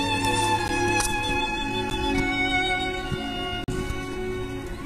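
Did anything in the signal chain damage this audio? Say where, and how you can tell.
Yes, two things went wrong. First, the audio drops to digital silence three times: brief ticks at 0.68 s and 1.9 s, each about 10 ms long, and a longer 40 ms hole from 3.64 to 3.68 s. Each block of digital silence starts and ends abruptly with no fade. That points to the driver or buffer stage. The output buffer wasn't filled in time, and those samples went out as zeros.

Second, from 1.35 s to the end, the adaptive stream switches to a lower bitrate. The quality changes all at once, with no gap. Above that point nothing is left above about 14.9 kHz, and codec artefacts become more noticeable. The sound points to a switch from something like AAC-LC at 96 kbit/s down to HE-AAC at around 20 kbit/s. That happens at the network stage, when the connection slows and the player moves to a cheaper rendition.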